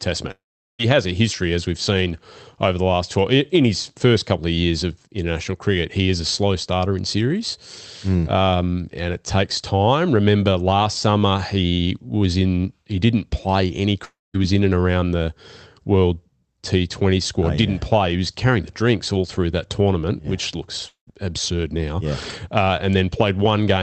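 Long network dropouts hit this speech clip at 0.31 to 0.81 s, before "has a history as", at 14.05 to 14.36 s, between "he didn't play any" and "was in and around", and at 20.88 to 21.14 s, after "that tournament yeah which". Each time the audio fades into a brief buzz or hiss then silence, and resumes with about 0.48, 0.30 and 0.20 s missing, most likely packets lost on the call link. The Opus call path cuts highs near 8 kHz.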